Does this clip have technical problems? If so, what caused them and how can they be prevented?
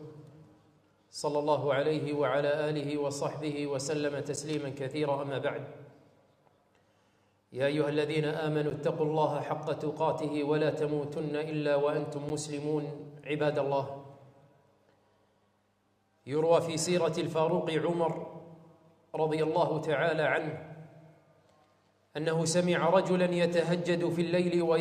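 Yes. Three blocks of digital silence, each 10 ms, hit at 4.36 s, 8.7 s and 12.29 s. The output likely went unfilled, and samples jumped to zero without fades, so each one is heard as a tick. On a waveform they show as flat gaps, and on a spectrogram as thin vertical broadband lines. Larger buffers or higher processing priority prevent this.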